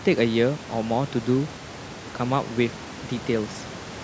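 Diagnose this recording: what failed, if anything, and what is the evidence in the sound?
Nothing failed: the sound shows only the ordinary call microphone processing, with no content above 8 kHz, and room noise sitting about 18 dB below the speech.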